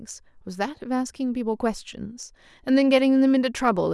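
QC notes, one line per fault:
No faults found in this speech recording. Nothing here needs a timestamp or a note.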